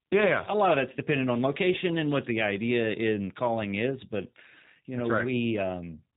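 From start to finish, the speech carries plainly audible G.729 codec damage. The sound fits an 8 kbit/s G.729A stream. The codec rebuilds speech from a filter model, a pitch predictor and a few pulses. Nothing above 4 kHz survives, and it sounds rough and synthetic.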